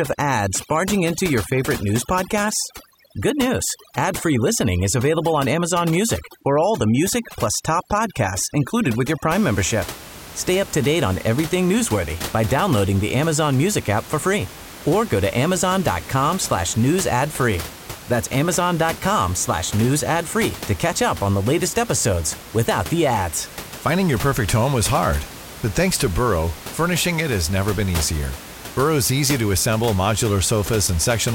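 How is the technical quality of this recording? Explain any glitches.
The main problem is overdone noise removal, from 0 to 9.33 s. A noise reducer set too hard mutes bands near its noise estimate, taking quiet speech too. Gaps sound silent and twinkly. Room noise sits about 15 dB below the speech.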